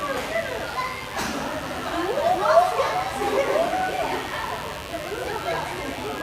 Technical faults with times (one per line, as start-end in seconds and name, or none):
0.00-6.23 mains buzz